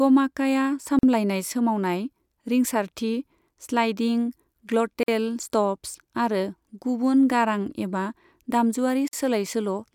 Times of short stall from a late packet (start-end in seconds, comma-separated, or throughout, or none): none